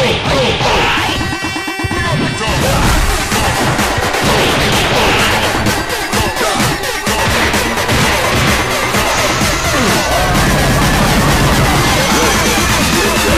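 No technical faults can be heard anywhere in this audio.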